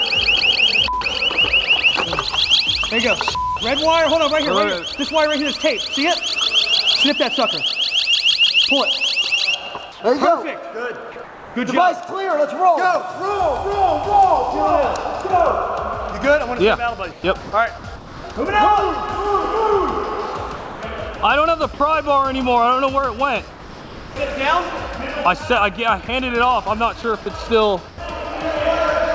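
The audio has come through a call path and shows nothing above 8 kHz, which fits a wideband call codec such as G.722. There are three kinds of fault. First, comfort noise in place of the background. At 9.92 to 10.00 s, 11.24 to 11.56 s and 27.88 to 27.98 s, the real background turns into a steady, featureless noise. That background sits about 19 to 22 dB below the loud parts. The fill is quieter by about 2, 3 and 6 dB respectively. The likely cause is discontinuous transmission: the sender stopped sending in pauses and the receiver synthesised noise. Second, sound chopped by the voice detector. From 17.12 to 18.36 s and from 20.56 to 21.20 s, the sound breaks up. About 560 ms and 300 ms of it give way to synthetic fill. This is likely a voice detector switching on and off repeatedly. Third, sound dropped by the voice detector. At 23.50 to 24.16 s, about 310 ms of real sound is lost under 660 ms of steady noise. 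Two short drops follow, at 26.06 to 26.08 s and at 27.02 to 27.04 s. Each clips 10 to 20 ms of sound. The likely cause is a detector mistaking quiet sound for background and cutting transmission.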